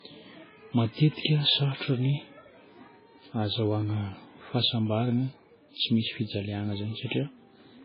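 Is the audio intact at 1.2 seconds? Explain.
No. At 1.2 seconds, as throughout the clip, the speech is dull and band-limited, with nothing above 5.2 kHz; a spectrogram shows a flat, empty ceiling there. This is likely low-bitrate audio saved at a high bitrate, a very low-bitrate MP3 (around 16 kbit/s) re-encoded at 320 kbit/s, which cannot restore the removed detail.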